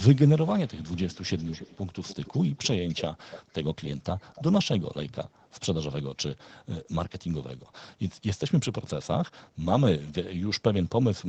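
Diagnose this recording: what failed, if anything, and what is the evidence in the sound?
Echo leak in call processing: a faint copy trails the speech by 288 ms, roughly 20 dB down (about 15 dB down at 2.88–3.03 s), at 0.67–2.68, 2.88–3.03, 3.25–3.54 and 4.33–4.43 s. The spectrogram shows repeated, shifted ghost harmonics. The likely cause is an incompletely cancelled loudspeaker echo.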